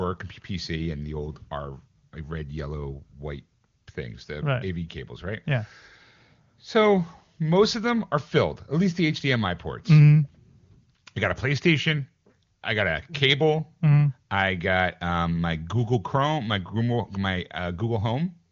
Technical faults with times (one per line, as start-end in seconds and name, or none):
none